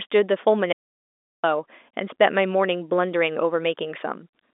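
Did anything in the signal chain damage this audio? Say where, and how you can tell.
Yes: an audio dropout to silence at 0.73–1.44 s. The speech drops to silence with no room tone, likely an input link lost while recording continued.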